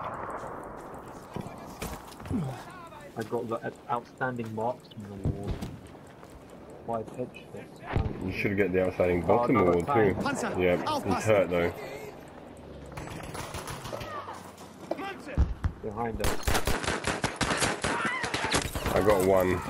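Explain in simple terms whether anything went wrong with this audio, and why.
The recording's input likely switched to a poorer device from 16.7 to 18.6 s. The sound briefly turns duller, losing everything above 11.4 kHz, and picks up faint new background noise.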